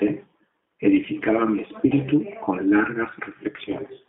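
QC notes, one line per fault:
Throughout: G.729 codec. The speech passes only from about 200 Hz to 3.6 kHz, so it sounds thin and narrow. At 8 kbit/s each short frame is rebuilt from a vocal tract filter, a pitch predictor and a few pulses. That gives voiced sounds a rough, slightly synthetic buzz. The damage is plainly audible. Consonants lose their edge and the upper band is simply absent.
1.87 to 1.95 s, 3.65 to 3.72 s: VoIP packet loss concealed by the speech codec. About 40 ms of audio drops out in the first gap and 20 ms in the second. The decoder fills each hole by repeating its last pitch and filter with falling gain. The speech smears into a buzzy tone or coloured noise that fades. The first gap, which points to two lost packets, is the longer. Recovery lags after each gap because every frame builds on the one before.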